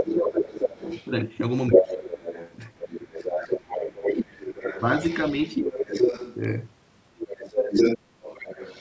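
Right from the start, 0.0 to 1.1 s, there's a second voice coming through at roughly the same level as the talker. That's the other side's voice leaking through, most likely the far end playing on the talker's loudspeaker and getting back into the mic because the echo canceller didn't scrub it all out. It returns from 1.71 to 6.35 s, sitting a little under the talker, and again from 7.19 s to the end, level with them again.

Overlapping those stretches, the talker keeps getting ducked. This is speech suppressed in double talk, likely the canceller failing to tell the talker from the echo and turning everything down. It happens from 0.03 to 0.85 s with a drop of around 15 dB, briefly and lightly from 1.69 to 1.85 s, hard at 2.86 to 3.32 s and 3.98 to 4.36 s where it nearly cuts out (around 25 dB down), and moderately from 5.63 to 6.01 s. The call's own band limit, with nothing above 8 kHz, is just the normal microphone path.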